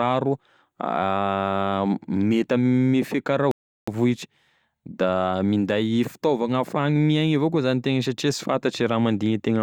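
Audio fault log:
3.51–3.88 s, rebuffering stall. Right after "mety ame fiakara" the speech cuts to silence. It resumes at exactly the point where it stopped. The player ran out of downloaded audio and waited for more. Nothing is skipped, but 0.36 s is added.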